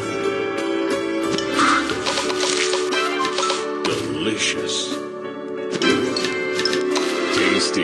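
No technical faults are audible anywhere in the recording.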